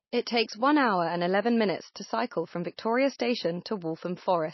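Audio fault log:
throughout, MP3 compression: The speech sounds dull and watery, with a swirling, unstable texture and nothing at all above 5.8 kHz, so s sounds lose their edge. The damage is plainly audible. This is likely MP3 encoding at a starved rate, which fits a bitrate of around 24 kbps. Short of bits, the encoder cuts all treble above a fixed frequency and drops quieter frequency components that flicker in and out between frames.
1.94 s, pre-echo: A short hiss, about 19 ms long, is heard just before a sharp onset, and the attack itself sounds softened and smeared. The coding noise is spread evenly across each transform block. When a sudden loud onset falls late in a block, the noise level set by the loud part also fills the near-silence ahead of it, so the hiss arrives before the sound that caused it.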